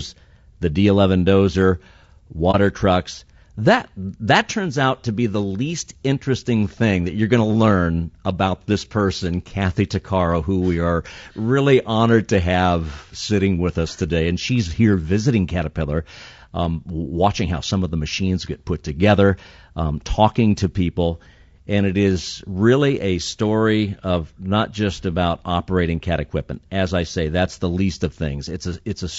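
It's a speech clip, and the whole thing has that rough, grainy texture of low-delay AAC compression, most likely AAC-ELD at a low rate, something around 32 kbps going by the sound. There's noise filling in between the voice harmonics and the top end sounds thin and a bit synthetic. At 2.51 to 2.55 s, just before "trucks that that turns", there's AAC frame loss with muting: the audio fades out and back in around a short gap, which fits a single lost frame of roughly 30 ms that the decoder zeroed.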